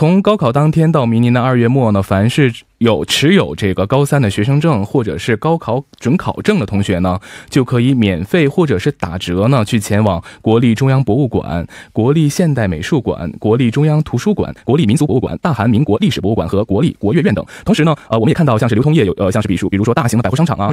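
At 14.40 s the speech suddenly rushes to about 1.81 times its pace with no pitch change, lasting to the end, likely a time-stretched section.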